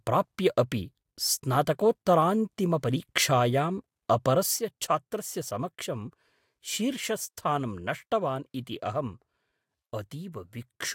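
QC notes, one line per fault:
4.59 s to end, one channel drops out: speech abruptly falls about 6 dB and stays low, likely one stereo channel lost before mono summing.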